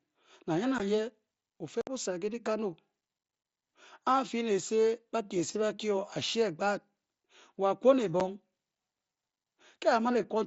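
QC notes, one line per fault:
0.78 s, 1.81–1.87 s, 8.2 s: unconcealed Bluetooth headset packet loss. Dropped headset voice packets leave silent gaps, the longest 60 ms, with abrupt edges.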